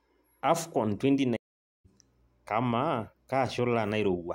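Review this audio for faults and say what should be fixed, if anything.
Playback stall from 1.36 s to 1.86 s: the speech cuts to silence mid-flow for about 480 ms, then resumes. The likely cause is the player running short of buffered data or its audio thread being blocked. A larger playback buffer and a high-priority audio thread would prevent it.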